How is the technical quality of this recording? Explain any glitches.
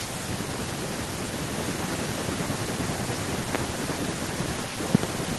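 The recording is compromised by two separate problems: a constant echo and a few loud pops.

Echo with no canceller runs through the whole clip. The far end's loudspeaker is picked up by its microphone and returned uncancelled, so every phrase comes back about 400 ms later, about 12 dB quieter and thinner. On a spectrogram, each speech burst has a fainter, smeared duplicate trailing it.

Loud pops occur once at 3.55–3.57 s and as a close pair between 4.95 and 5.06 s, each peaking roughly 20 dB above the speech. A voltage step, likely from a plug, switch, static or driver glitch, produces sharp thumps over continuing speech, visible as tall waveform spikes and full-height vertical spectrogram lines.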